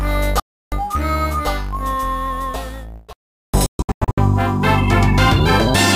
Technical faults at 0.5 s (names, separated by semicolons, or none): digital broadcast dropout